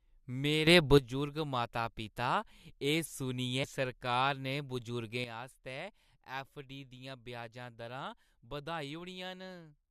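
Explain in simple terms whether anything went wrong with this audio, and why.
A sudden gain jump, likely a volume setting applied instantly rather than smoothly, makes the speech and background noise leap louder together from 0.67 to 0.98 s, then drop sharply quieter from 5.24 s to the end.

A stream segment skipped, likely a piece of the stream that failed to load, makes the speech jump abruptly ahead at 3.63 s, losing a moment of the recording.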